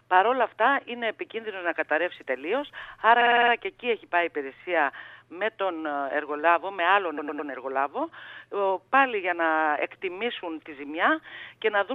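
A short run of compressed frames was sent again and again, so the decoder replays it. These repeated frames stutter from 3.20 to 3.52 s, a 52 ms block looping six extra times, then from 7.17 to 7.49 s, a 105 ms block three extra times, each adding 0.31 s.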